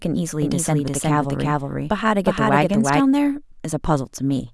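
From 0.42 s to 3.0 s the speech carries a doubled audio track: a second full-band copy of the same sound runs roughly 0.4 s behind the first, at about the same level. It has no decay or added room colour, and it switches on and off abruptly at those two points. The likely cause is the signal being captured twice, once through a slower path, or an edit leaving two copies out of step.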